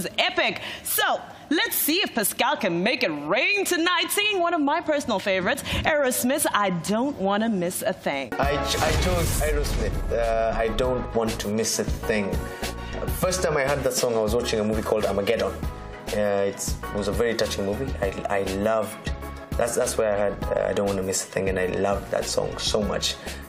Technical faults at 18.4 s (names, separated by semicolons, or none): dropped buffer (overrun)